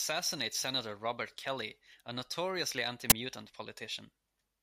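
At 3.10 to 3.12 s, just after "a notoriously", the speech is cut by a brief, very loud burst of harsh digital noise. This is an uninitialised buffer: a 20 ms block was played before any audio was written into it, so leftover memory contents came out as samples.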